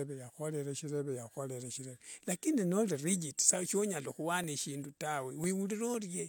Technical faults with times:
3.94-5.94 periodic USB or driver dropouts

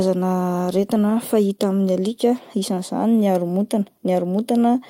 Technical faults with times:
none

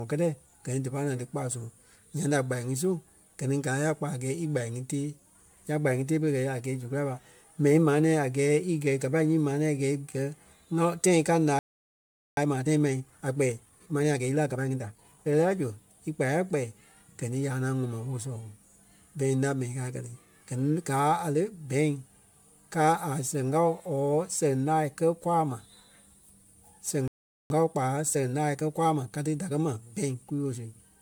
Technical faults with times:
0.00-31.01 generation loss
11.59-12.37 playback stall
12.37-15.37 time-compressed catch-up
27.08-27.50 playback stall
27.50-30.50 time-compressed catch-up

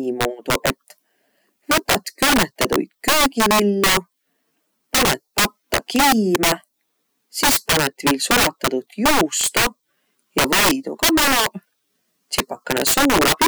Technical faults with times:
0.00-13.47 integer overflow

